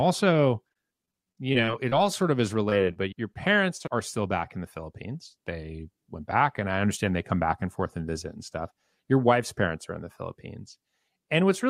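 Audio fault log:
0.33–1.94 s: repeated packet loss (robotic sound). The speech turns choppy as eleven small holes, none longer than 27 ms, are each bridged by extending the previous sound.
2.70–2.73 s, 2.93–2.98 s, 3.34–3.37 s: short concealed packet loss. Each is a brief smear or wobble where about 20 ms never arrived and the receiver continued the last sound before blending back.
3.77–3.82 s: short stall from a late packet. A sound is held slightly too long with a slight buzz or dip while the jitter buffer waits about 28 ms, but nothing is lost.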